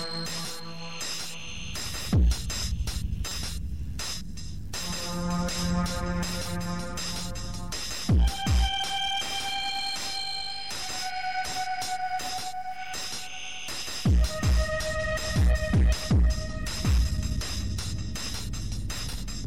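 At 3.28 to 3.32 s a corrupt frame decoded: one compressed frame with damaged bits was played anyway, so misread values put energy at the wrong frequencies. It sounds like a short chirp or blip, and a spectrogram shows a brief vertical smear peaking around -20 dBFS.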